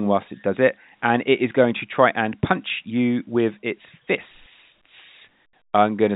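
No faults found; the speech carries the narrow telephone band that A-law G.711 coding gives, with nothing above 4 kHz, which fits a 64 kbps line.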